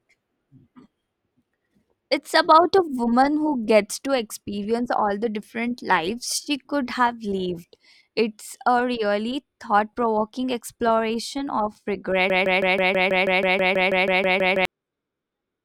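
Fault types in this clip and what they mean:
Broken-record loop: a 0.16 s fragment repeats 15 times from 12.3 to 14.65 s, likely a stalled stream; waveform and spectrogram show identical tiled blocks.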